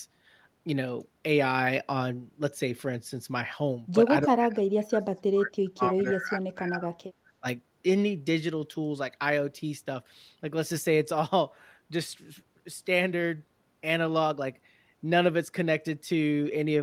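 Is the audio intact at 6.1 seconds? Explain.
No. The speech is heavily attenuated from 4.26 to 6.92 s, dropping by roughly 35 dB, as speech suppressed in double talk, likely because the echo canceller turned down both sides when both talked at once. From 6.05 to 6.1 s, an echo leak adds a faint copy of the sound about 35 dB down, delayed 285 ms, likely residual loudspeaker pickup the canceller missed.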